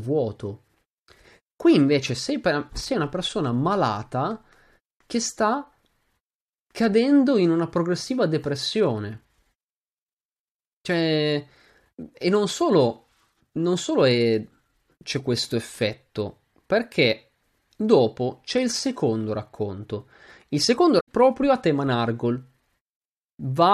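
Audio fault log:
20.97–21.08 s, damaged data in a compressed stream: corrupted bytes make the decoder misread frames and lose sync, producing a brief glitch just before "a tema".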